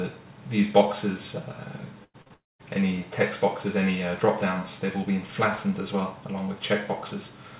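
A burst of packet loss at 2.04 to 2.16 s removes about 100 ms of audio. The receiver stretched the last sound over the hole and turned it down, so a fading buzz or hiss replaces the lost stretch before the audio resumes further on. Short concealed packet loss follows at 2.22 to 2.28 s and again at 2.28 to 2.32 s, gaps of about 40 and 20 ms. Each was patched by extending the preceding sound and blending back, leaving a brief smear or wobble. A long network dropout from 2.34 to 2.61 s then loses about 260 ms, likely because no packets arrived for that stretch. The last sound is carried on and fades, and roughly 0.2 s of near-silence remains before the audio returns without the missing part. Throughout, nothing is heard above 4 kHz, with the grainy floor of a narrowband call codec, which fits G.711 mu-law at 64 kbps.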